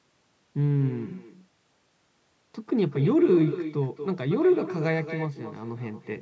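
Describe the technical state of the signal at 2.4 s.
Echo with no canceller runs through the whole clip, including 2.4 s: the far end's loudspeaker feeds its microphone, returning the speech roughly a fifth of a second later, about 10 dB quieter and thinner.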